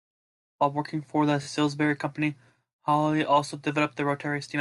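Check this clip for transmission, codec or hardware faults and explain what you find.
One transmission fault appears: a Bluetooth stutter from 1.43 to 1.49 s, right after "working for the". Audio packets went missing, so the receiver replayed its last buffer, giving a brief machine-gun buzz. The speech then resumes about 43 ms further on, which fits two lost frames.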